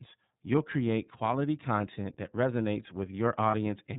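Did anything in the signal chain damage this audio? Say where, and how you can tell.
Yes. At the codec stage, iLBC coding runs throughout. Nothing passes above 4 kHz, and the speech sounds rough and synthetic. The damage fits the 13.33 kbps, 30 ms mode.

On the network, one iLBC frame was lost, about 30 ms, from 3.51 to 3.55 s. The decoder repeated the last pitch cycle, giving a brief buzzy hold. The voice is right again almost at once afterward.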